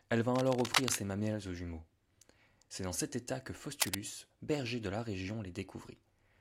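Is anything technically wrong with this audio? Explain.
Yes, there is cable scratch noise from 0.35 to 0.95 s, just before "mamelles aux jumeaux", and from 3.80 to 3.96 s, between "dans cet état que" and "berger de la". It is likely a worn cable or connector whose contact resistance jumped as it moved. Each burst is a rough scratching roughly as loud as the speech. On a spectrogram it shows as dense, ragged broadband smears, and on a waveform as jagged, irregular spikes.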